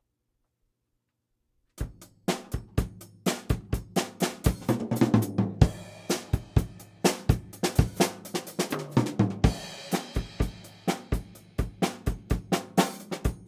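No technical faults are audible anywhere in this recording of sounds.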